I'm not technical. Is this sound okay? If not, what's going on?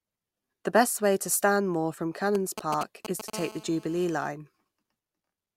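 No. From 2.35 to 3.30 s you hear GSM signalling bursts: a nearby 2G mobile phone briefly contacting its network, picked up as galloping ticks in short clusters. From 3.33 to 4.29 s it becomes a GSM phone buzz: a continuous, raspy drone pulsing 217 times a second, quieter than the bursts but steady, as during a call.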